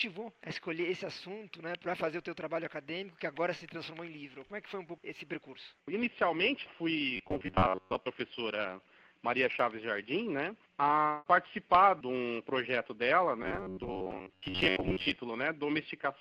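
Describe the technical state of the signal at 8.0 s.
At 8.0 s the audio is inside a stretch of robotic sound from repeated short buffers, from 7.16 to 8.07 s. A rigid 93.8 Hz buzz is heard, likely from a roughly 10.7 ms slice being replayed for most of the span. Unlike a stutter, the repeats are too short to hear as separate echoes and merge into a fixed pitch.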